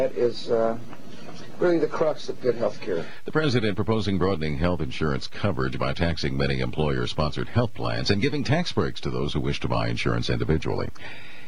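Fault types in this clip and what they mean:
Nothing stood out on listening to this audio.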